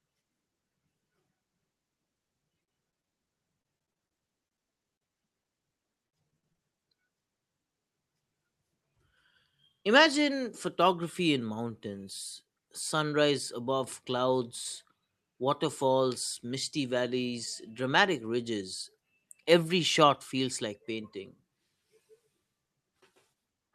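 Repeated packet loss (robotic sound) hits from 2.63 to 3.14 s and again from 3.60 to 4.67 s. Packets kept failing to arrive in time, and each hole, the longest about 38 ms, was bridged by extending the preceding sound. In the first stretch this happens five times and in the second ten, so roughly a quarter of each span is synthetic. The speech turns choppy, with fragments clipped out.

Short concealed packet loss follows at 4.96 to 5.13 s, with a 40 ms hole patched and a little extra time slipped in. Within it, 5.08 to 5.11 s loses another 20 ms, and a separate 20 ms hole appears at 5.42 to 5.46 s. Each time the decoder carried the last sound forward, either from its pitch or as shaped noise, and then crossfaded back. What you hear is a brief smear or wobble, and a short consonant can drop out.

Repeated packet loss (robotic sound) returns from 6.06 to 6.81 s. Over that span there are six gaps, the longest about 58 ms, and about a fifth of the span is filled in, which gives the same robotic choppiness. 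Through the Opus call path the audio stops near 12 kHz.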